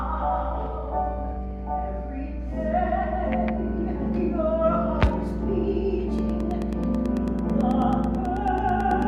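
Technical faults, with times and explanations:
6.19–9.03 s, train of clicks: around thirty near-identical clicks tick at a steady 9.2 per second, peaking a few decibels above the sound, likely from electrical interference or a faulty connection. The waveform shows evenly spaced spikes, and the spectrogram shows thin vertical broadband lines.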